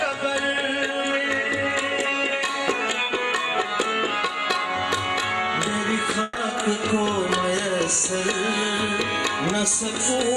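At 6.23 s a burst of packet loss begins, lasting to about 6.37 s. Packets arrived too late or not at all. The receiver filled the 120 ms gap by extending the last sound and fading it down. About 120 ms of audio is missing when playback resumes.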